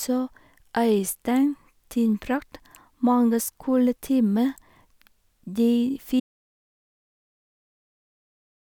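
At 6.2 s the speech cuts off abruptly into total silence, with no room tone, lasting to the end: an audio dropout to silence, likely from lost input.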